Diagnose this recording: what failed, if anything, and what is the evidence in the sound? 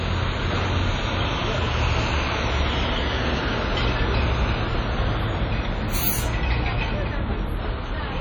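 The codec stage is the likely culprit: WMA compression, which fits an old WMA 1 encoder at a low bitrate around 32 kbps. Throughout, the sound rings and turns washy, with a hiss that swells and fades with the signal, and the damage is heavy.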